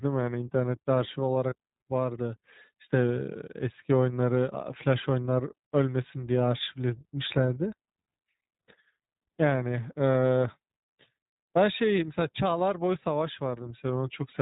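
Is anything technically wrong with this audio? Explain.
Yes, there are two faults.

The whole clip is narrowband speech coded with the iLBC codec, and the coding damage is plainly audible. The codec models each short frame's excitation independently, which here fits 20 ms frames at a low VoIP rate around 15 kbps. It also discards everything above 4 kHz. As a result, the speech sounds muffled and band-limited, with a rough, slightly synthetic grain over the voice.

From about 1.50 to 1.54 s, there are lost iLBC frames. The sound points to a single 20 ms frame going missing. The decoder covered the hole by repeating the last pitch cycle and blending in noise, so the gap sounds like a brief held vowel, faintly buzzy and breathy, rather than silence. Because each iLBC frame decodes independently, normal speech resumes immediately afterward.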